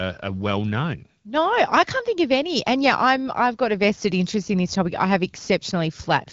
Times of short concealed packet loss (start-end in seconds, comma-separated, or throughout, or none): none